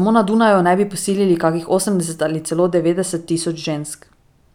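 Channel delay (comb filtering) from 2.62 s to the end at 4.54 s: one channel lags the other by roughly a single sample, a few hundredths of a millisecond. Summed to mono, the first cancellation notch falls near 20 kHz, so the speech loses some top-end air and turns slightly dull.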